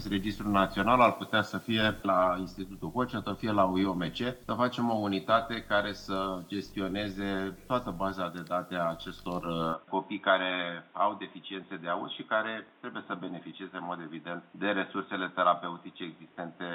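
At 9.74 s the recording most likely switched its input to a poorer device. From that point to the end, nothing reaches above 3.8 kHz, so the sound turns dull and boxy, with no gap at the switch, little change in level, and a faint new background noise about 35 dB below the signal.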